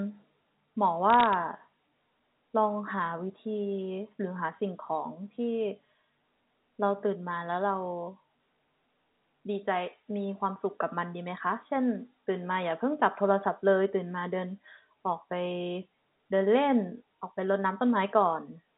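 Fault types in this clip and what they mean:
Bit errors on a digital phone line: from 1.10 to 1.34 s, sharp isolated ticks crackle over the speech, each a single flipped sample at roughly one bit in five hundred; unlike packet loss, nothing goes silent or repeats, and the speech underneath stays intact.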